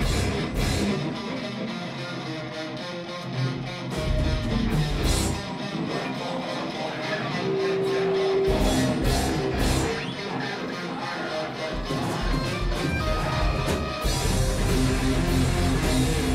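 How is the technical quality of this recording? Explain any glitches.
Nothing stood out on listening, and no glitches could be heard anywhere in the recording.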